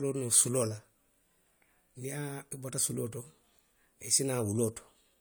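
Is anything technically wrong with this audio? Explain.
No technical faults are audible.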